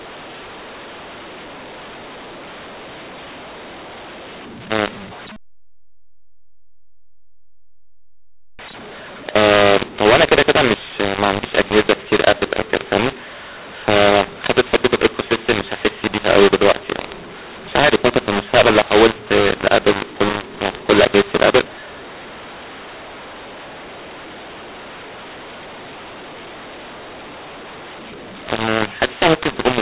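Telephone-band speech, with nothing above 4 kHz, which fits 8 kHz G.711 sampling. Throughout the clip it shows a mu-law and A-law mix-up: the A-law codes are being expanded with the mu-law curve, so levels are scrambled, the speech sounds harsh and distorted, and the pauses carry a raised noise floor instead of silence.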